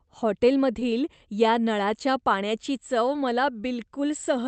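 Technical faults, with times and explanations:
0.79 to 0.83 s, short concealed packet loss: about 20 ms of the speech never arrived in time, so the decoder stretched the preceding sound to cover the hole and then crossfaded back. You hear it as a quick smear or wobble, against the call path's 8 kHz top end.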